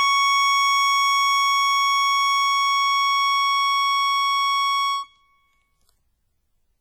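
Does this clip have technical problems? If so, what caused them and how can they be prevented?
Yes. The music carries heavy WMA compression damage from start to finish: a ringing, washy quality with a hiss that swells and fades along with the playing. The cause is likely a low-bitrate WMA encode, and the sound fits something around 32 kbps. At that rate, the encoder's long transform blocks smear quantisation noise over tens of milliseconds, and quieter partials get dropped entirely. To prevent it, keep a lossless master and encode at a much higher bitrate or with a better codec.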